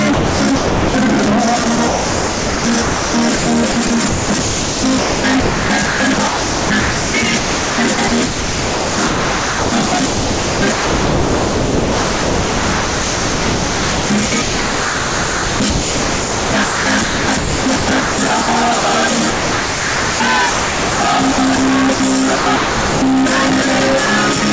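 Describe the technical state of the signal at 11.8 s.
At 11.8 s the audio sits inside a stretch of sound chopped by the voice detector, running from 1.64 s to 23.02 s. Sending likely switched off repeatedly, and about 14.6 s of material was replaced by comfort noise. Packet-loss concealment would instead repeat or smear fragments. The whole band stops at 8 kHz, which fits a G.722 call codec.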